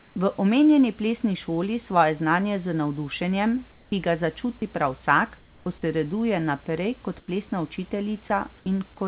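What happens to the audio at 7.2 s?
From 7.2 to 7.28 s, the real room background drops out for 80 ms. In its place comes a steady, featureless hiss, about 5 dB quieter than the background it replaces. That background sits about 30 dB below the loud parts. This is comfort noise in place of the background. The likely cause is discontinuous transmission. The sender paused during silence, and the receiver filled the gap with synthetic noise.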